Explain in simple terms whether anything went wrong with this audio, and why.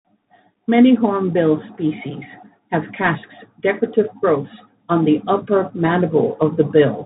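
Something did go wrong, and it runs through the whole clip: the speech has been squeezed through a Bluetooth CVSD headset codec, the old narrowband link that headsets fall back to for calls. It records only whether the sound goes up or down at each tiny step, so nothing above about 3.8 kHz survives. The voice sounds muffled and boxy, s sounds come out scratchy, and a grainy hiss sits underneath, all plainly audible.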